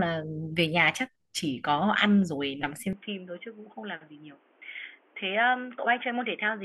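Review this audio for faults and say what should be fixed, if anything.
From 2.93 s onward, the input likely switched to a poorer device. The spectrogram empties above 3.5 kHz, the waveform shrinks slightly, and faint new noise appears. Lock the recording input to one device so the system cannot switch microphones or headset profiles mid-recording.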